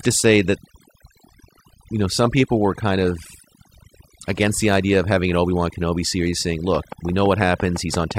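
From the first second to the last, the speech carries overdone noise removal. A noise reducer was pushed too hard on a noisy recording. It cuts any frequency band that sits near its noise estimate, and the quieter parts of the voice fall with it. The background drops, broken by twinkling, watery specks.

At 6.75 s a train of clicks begins and runs to 8.12 s. The pulses arrive at a steady 5.9 per second, about ten in all. Each has much the same sharp shape. They peak at about 10 dB above the speech, so they stand out clearly as ticking over the voice and in the gaps. The likely cause is interference from nearby equipment or a faulty connection or power supply.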